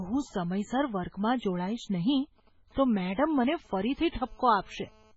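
The whole clip has a watery, swirly quality with smeared attacks and nothing above 7.7 kHz, and the damage is heavy. That's likely MP3 compression at a low bitrate, around 16 kbps, where the encoder drops weak frequency lines frame to frame and cuts the top end.

Right after "જોડાઈશ નહીં", from 2.24 to 4.14 s, you get GSM signalling bursts: a galloping dit-dit-dit of short buzzes at about 217 Hz, roughly 30 dB under the speech. A nearby 2G phone is sending brief radio bursts, and the audio circuit rectifies them.

From 4.18 to 5.12 s it turns into GSM phone buzz, a hard, raspy, steady buzz at about 217 Hz with lots of harmonics, about 32 dB below the speech. The phone has moved into a call and is transmitting its pulses 217 times a second, and these get rectified into the audio.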